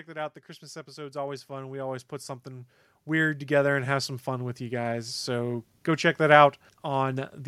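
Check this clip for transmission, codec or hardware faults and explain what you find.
One fault is present: automatic gain rising. From 0.05 s to 5.35 s, the automatic gain control judges the input too quiet and steadily raises its gain by about 18 dB. Speech and background noise swell together, levelling off just before "go check that".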